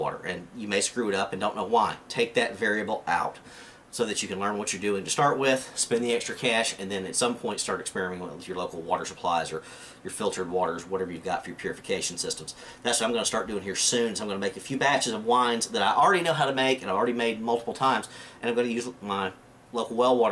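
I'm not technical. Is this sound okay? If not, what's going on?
Yes, nothing is wrong here.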